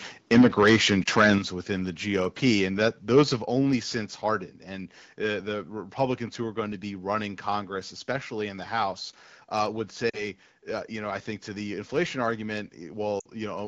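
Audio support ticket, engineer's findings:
Microphone overload, 0.31 to 1.34 s. Harsh crackle on loudest syllables, peaks about 10 dB over full scale, around 7% of samples flattened. Likely cause: mic input gain set too high, converter clipping. Distortion tracks signal peaks, unlike the clear sound of the AMR wideband (HD Voice) codec, consistent with its 12.65 kbit/s mode.

Microphone volume stepped down, 0.39 s (about 2 dB), 1.38 s before "within the" (about 6 dB), 3.42 s before "only since" (about 5 dB). Voice and background drop together, instantly, and stay down. Likely cause: call software cutting device input gain after clipping. A permanent level shift, not a gap that recovers.

Lost AMR speech frames, 1.03 to 1.08 s, brief warble, fits one lost 20 ms frame. 10.09 to 10.24 s, between "uh would" and "uh you know I", about 40 ms dropping to near silence. 13.19 to 13.26 s, about 60 ms fading out. 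Decoder concealment repeats last parameters with falling gain, then a weak rough onset. Momentary, level returns afterwards.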